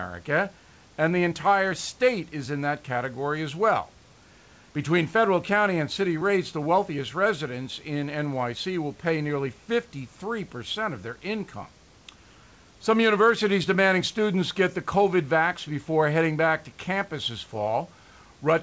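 No technical faults can be heard anywhere in this speech recording. The call path's band limit shows as an absence of content above 8 kHz, consistent with a wideband codec such as G.722, and a low room noise sits about 35 dB below the speech.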